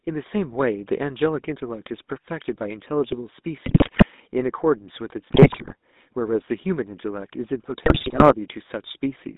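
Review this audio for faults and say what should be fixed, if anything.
The whole clip has a buzzy, gravelly roughness with a narrow, telephone-like band of about 200 Hz to 3.7 kHz. This is the GSM full-rate codec: speech is rebuilt from a vocal-tract filter driven by sparse, regularly spaced pulses, a coarse excitation that fits 13 kbps GSM. Prevent it by capturing or transmitting over a wideband or higher-rate codec instead.

Three bursts of squawking, popping and gargling break up the speech at 3.66–4.05 s, 5.29–5.74 s and 7.86–8.34 s. These are GSM bit errors. Corrupted filter, pitch and gain values warp the spectrum and spike the level frame by frame, which points to an error rate of several percent. Prevent them with a stronger radio link or better error protection and concealment.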